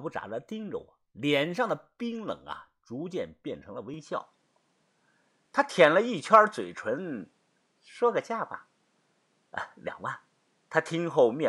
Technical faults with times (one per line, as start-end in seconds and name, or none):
3.94-11.48 input switched to a poorer device